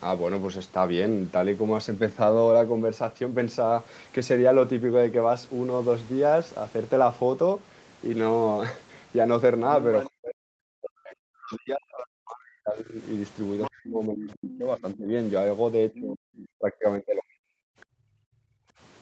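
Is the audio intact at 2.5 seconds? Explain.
Yes, the speech at 2.5 seconds is intact, with nothing dropped, clipped or distorted.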